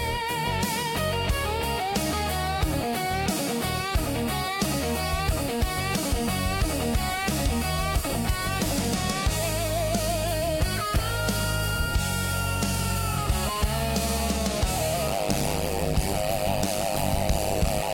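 From 15.07 s to 17.93 s the sound is broken by overlap-add ripple. The audio was reassembled from windowed frames whose overlap fails to sum to a steady gain, so the level dips once per frame, here by about 60 dB at around 100 Hz. That fast rate, from short frames, turns it into a harsh, metallic buzz with extra tones around each note. Unlike gating or dropouts, the dips are strictly periodic and locked to the frame rate, never following the signal's own dynamics.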